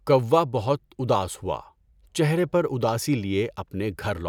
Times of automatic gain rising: none

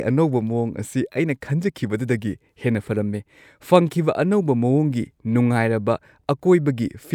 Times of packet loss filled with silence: none

